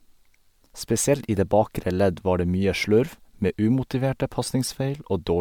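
Speech that carries generation loss from start to finish: the sound is swirly and hollow, with smeared, softened consonant attacks and a watery texture that is heavier than a single lossy pass would leave. The spectrum stops at about 19.9 kHz, which fits an MP3 chain at around 128 kbit/s. The likely cause is repeated decoding and re-encoding, on the order of seven passes, each quantising on a shifted frame grid so the noise and spectral gaps pile up.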